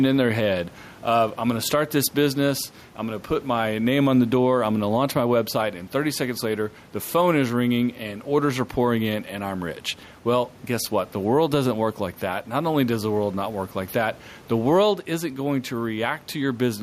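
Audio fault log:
throughout: gain pumping. The room background, about 30 dB below the speech, swells in each pause and ducks by around 5 dB under every loud sound, squashing the speech. A fast limiter on gain set too high is likely. Unlike a noise gate, the background never cuts out.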